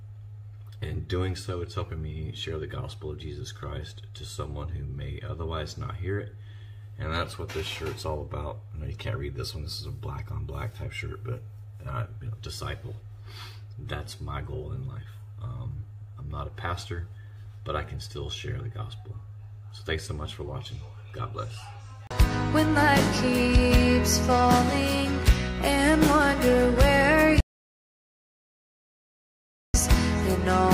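At 27.41 s the sound cuts off abruptly into total silence, with no room tone underneath, and resumes at 29.74 s, leaving 2.3 s missing. This audio dropout to silence likely comes from the input being lost while the recorder kept writing zeros.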